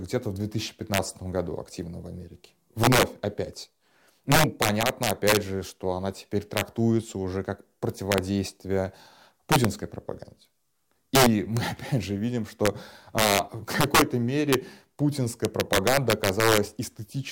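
Integer overflow runs through the whole clip: the speech was driven about 8 dB past the integer limit, and instead of clamping, each peak over it wrapped to the opposite sign. Under one percent of samples are affected, but every one becomes a violent crack on loud syllables.

Loud pops occur from 11.57 to 11.59 s and from 13.75 to 13.77 s, each a single sharp burst well above the speech, the first noticeably stronger. The likely cause is a brief voltage pulse from a switch, static or driver glitch, with the speech continuing underneath.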